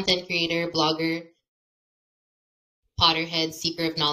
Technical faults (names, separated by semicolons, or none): adaptive stream starting at a low bitrate